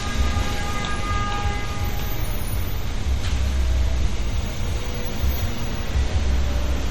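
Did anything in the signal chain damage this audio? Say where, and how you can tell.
Yes. The damage sits at the codec stage and runs through the whole clip. Nothing is present above 17.2 kHz, a hard treble ceiling rather than a natural roll-off. The sound has a watery, swirling quality, with plainly audible artefacts as weak spectral detail flickers on and off. That points to MP3 compression, likely at a low bitrate around 48 kbps. Short of bits, the encoder cut the top band and discarded quiet frequency lines frame by frame.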